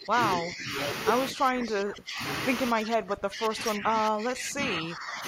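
The speech ducks at 0.00–0.17, 0.37–0.72, 1.32–2.21 and 2.71–5.24 s, sinking by roughly 10 to 25 dB. This is speech suppressed in double talk, likely an echo canceller muting over the far side. Unlike packet dropouts, the dips follow another talker, not random instants.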